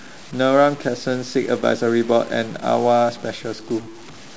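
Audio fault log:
throughout, stuck bit: a harsh, buzzy distortion sits on the speech, and the pauses fill with a gritty noise, likely from one data bit held at a fixed value by a faulty line or converter. About half the samples are pushed off by that bit's weight, a step near -35 dBFS, in a pattern set by the waveform. On the waveform, quiet gaps show a flat-topped fuzz of constant height. On a spectrogram, broadband hash spans all frequencies, even between phrases.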